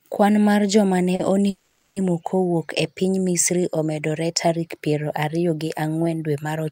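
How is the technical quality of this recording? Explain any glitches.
Quality is compromised by two network playback interruptions in the speech, one brief and one long.

At 1.15 to 1.21 s there is a short stall from a late packet. The jitter buffer ran dry, so the receiver held the last sound for about 40 ms until the data arrived. Speech then resumes in place, with nothing lost, just a slightly stretched syllable with a faint buzz or dip.

From 1.49 to 1.98 s the audio freezes for roughly half a second, a call audio freeze. The final sound is extended for about 470 ms as a fading buzz or hiss that ends in a short silence, then speech continues where it stopped. The likely cause is packets held up in transit, emptying the jitter buffer.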